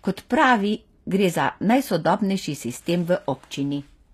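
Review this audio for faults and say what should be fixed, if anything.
Throughout the clip, the speech was likely squeezed through HE-AAC compression at a low bitrate, consistent with around 24 kbps, so only the lower spectrum is properly coded and the treble is rebuilt by copying lower bands upward under a coarse envelope. The rebuilt top end sounds synthetic, with harmonics that fail to align across the crossover, leaving s sounds gritty and metallic, and nothing reaches above 14.9 kHz. Encoding at a higher bitrate, or with plain AAC rather than the band-replication profile, would prevent this.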